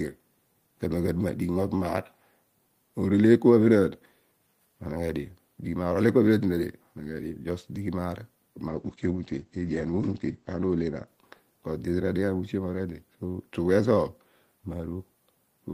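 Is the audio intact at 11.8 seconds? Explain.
No: 11.8 s falls inside a call bitrate drop (8.69–11.97 s). The encoder fell from 32 to 11 kbps, muffling and roughening the sound; a spectrogram shows everything above 8 kHz cut off.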